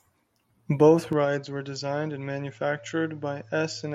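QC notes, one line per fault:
1.13 s to end: input switched to a poorer device, likely. The sound turns duller with no gap, losing everything above 7.6 kHz, dropping about 5 dB in level, and picking up a faint new noise floor about 45 dB below the speech, as a narrower-band microphone would.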